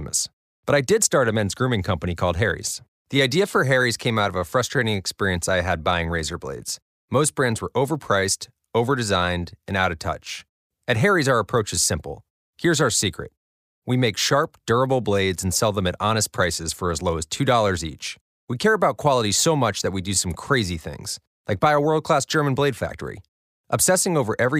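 No technical faults can be heard anywhere in the speech. There is nothing in the audio that calls for a timed description.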